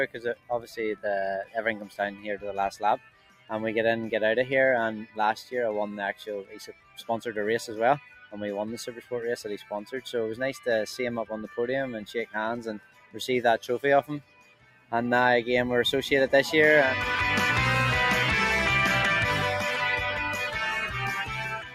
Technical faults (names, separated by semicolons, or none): noise suppressor applied to music or sounds; sound cut by the noise suppressor